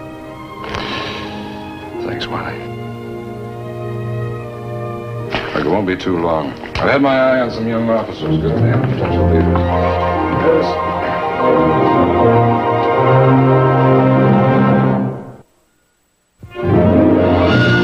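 No technical faults are audible.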